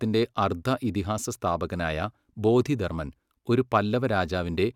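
No technical faults can be heard at any point in the clip.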